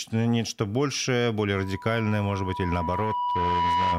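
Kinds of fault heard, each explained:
Loudspeaker feedback squeal: the mic is catching its own loudspeaker, and the loop runs away at one pitch, here about 979 Hz. Right after "нечто большее" at 1.54 s it swells over a couple of seconds, ends up a few dB above the speech, and holds to the end.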